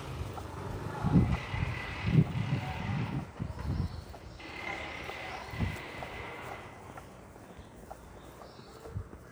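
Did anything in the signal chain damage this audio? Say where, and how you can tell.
No, nothing in the signal chain has left an audible mark on this recording of sounds, and the signal is intact with nothing introduced by any stage between capture and playback.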